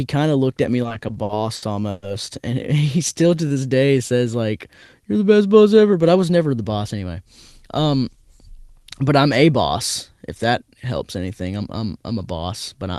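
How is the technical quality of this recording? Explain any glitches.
The recording has three timing glitches from the receiver's jitter buffer.

From 0.83 to 2.04 s, just after "of looked at me", there are repeated stalls (stutter). Packets arrived late about a dozen times, so the receiver stretched the last sound to bridge each wait. The longest wait was 120 ms. Nothing is lost, but the stretch drags and stutters.

From 3.13 to 3.99 s, just before "says like", there is a jitter buffer slow-down. The buffer ran low, so the receiver repeated pitch periods to add 125 ms. Speech plays at 86% speed at unchanged pitch and sounds drawn out.

From 5.92 to 6.95 s, after "the best boss", there is a jitter buffer speed-up. Excess buffered audio was trimmed by about a tenth of a second. Speech runs at 110% speed at the same pitch and sounds hurried.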